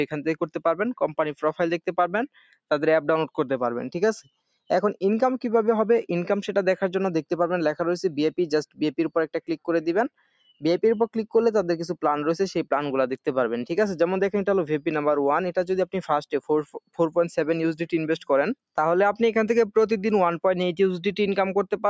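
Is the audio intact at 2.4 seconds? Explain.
No. At 2.4 seconds the sound is being cut by the noise suppressor, across a span from 2.32 to 2.54 s. The suppressor mistook this stretch for background noise and pulled it down harder than its surroundings, by as much as about 20 dB at the deepest point. For roughly a fifth of a second the sound sinks noticeably in level, then recovers. The call's microphone processing, which limits everything to below 8 kHz, is normal here.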